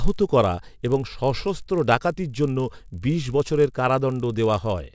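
Throughout, a 50 Hz buzz accompanies the speech: a resampler restarted on every 20 ms block. Unlike mains hum, it vanishes in pauses, tracking signal.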